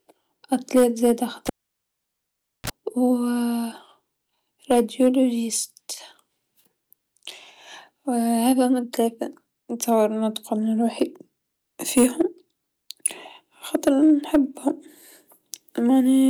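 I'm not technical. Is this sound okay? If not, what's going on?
No, there's one clear problem. At about 1.47 s you hear a cable pulled and plugged in while the audio was live. There's a pop, then the speech drops to near silence for roughly 1.2 seconds. Just before it comes back you get a very short buzz, about 30 milliseconds of 60 Hz mains hum, as the plug's tip touches first. Then another pop at around 2.70 s as the sound returns.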